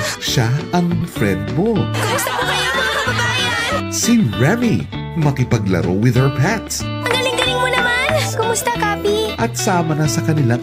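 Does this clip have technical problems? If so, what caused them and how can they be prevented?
Yes, there are two kinds of problem. First, a skip ahead at about 1.01 to 1.12 s. Roughly 0.4 s of audio just never plays. Playback jumps forward and the two sides are butted together with essentially no gap, so the sound lurches. That happens when a chunk is lost in transit or dumped by an overflowing jitter buffer while later audio is already queued, which cuts the delay by about 0.4 s in one go. Keeping the network path less bursty and giving the buffer enough headroom so it doesn't overflow would prevent this.

Second, there are two jitter buffer speed-ups. The first is brief, at 1.61 to 1.74 s, running at 135% speed and trimming roughly 50 ms. The second is gentler but longer, from 4.10 to 5.51 s, at 110% speed and shaving off around 150 ms. In both, the receiver was holding more audio than it wanted, so it snipped out tiny pitch-period-sized pieces over and over. 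The pitch stays the same while the audio runs faster and sounds rushed. Smoother packet delivery, or a buffer that drains its excess more slowly, would avoid it.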